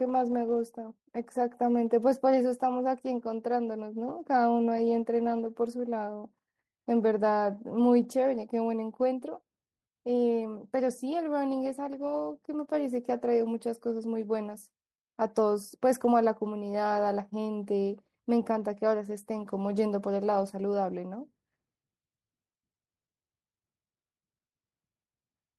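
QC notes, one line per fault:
Nothing stood out on listening to the speech.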